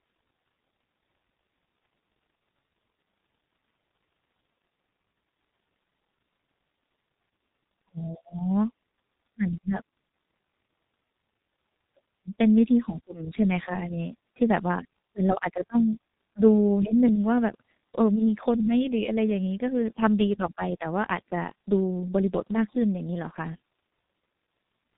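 From start to finish, the speech carries heavy G.723.1 codec damage. Nothing above 3.8 kHz survives, and the rate points to about 6.3 kbit/s. The speech sounds muffled and hoarse, with smeared consonants.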